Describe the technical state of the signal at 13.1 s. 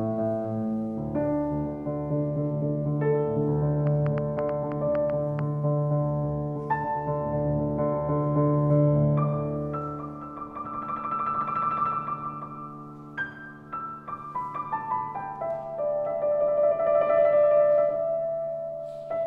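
At 13.1 s the signal is intact, with no dropout, distortion, glitch or other technical fault audible at that point.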